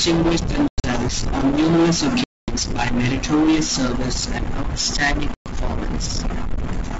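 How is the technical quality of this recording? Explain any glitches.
The recording has three hard dropouts, caused by packet loss on an ADPCM call, against otherwise clear G.722 wideband audio with at most a faint upper-band hiss.

Packet loss on an ADPCM call occurs at 0.68–0.85 s (about 140 ms of sound lost in several gaps, the longest 100 ms, just before "on numerous"), at 2.24–2.49 s (240 ms, between "on numerous" and "by meritorious service and") and at 5.34–5.51 s (120 ms, after "meritorious service and outstanding"). Each sounds like a sudden silent hole. The audio then resumes slightly distorted before settling. The decoder's adaptive predictor and step size lost track of the sender's during the missing packets and need a few tens of milliseconds to realign.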